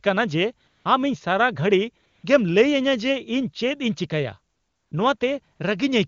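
In five pauses the real background drops out and is replaced by a smooth, even hiss that switches in and out: 0.67 to 0.85 s, 2.05 to 2.23 s, 4.53 to 4.91 s, 5.17 to 5.19 s, and 5.55 to 5.59 s. This is AMR comfort noise. The phone judged the talker silent, stopped sending speech frames, and the receiver synthesised filler noise from a rough level and spectrum estimate, within a clean, high-rate AMR wideband (HD Voice) path.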